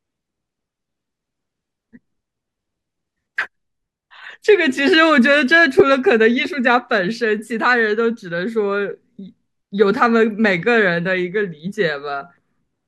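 Speech with a block of digital silence at 5.80 s. The sound drops to silence for about 1.3 ms, which fits a 64-sample buffer at 48 kHz that was not filled in time. Unlike a brief fade-out dropout, both edges are abrupt, so it registers as a tick or dip.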